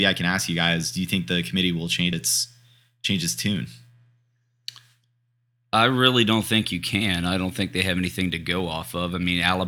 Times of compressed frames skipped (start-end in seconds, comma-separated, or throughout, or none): 2.11